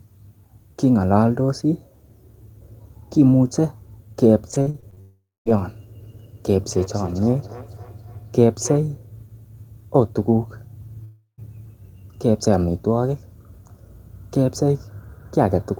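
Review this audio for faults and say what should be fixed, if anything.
Packets were repeatedly lost or late between 4.51 and 4.99 s, and each hole was patched by stretching the preceding sound. About seven short holes, the longest 41 ms, leave roughly a third of that stretch synthetic, so the repeated packet loss sounds choppy and robotic.

A long network dropout likely occurred at 5.01 to 5.48 s, following straight on from the choppy stretch, and again at 11.04 to 11.40 s. In the first, about 460 ms of audio is missing, filled by a fading continuation and then 230 ms of silence. In the second, about 340 ms is missing, ending in 100 ms of silence before the sound resumes.

From 6.03 to 8.91 s, two devices in one room were on the same call. One played back what the other's microphone sent, and that microphone captured it again. This feedback echo between two devices returns each phrase around a third of a second later, at about 18 dB below the speech, thinner and ringier on each pass.

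Muting or removing the second device in the room and improving the network path's stability, or adding jitter buffering, would prevent these faults.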